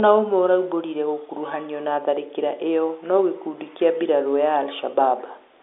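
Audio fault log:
Nothing to log here: the speech just sounds like an ordinary phone line, with its narrow telephone band topping out around 3.8 kHz, and no faults turn up anywhere along the way.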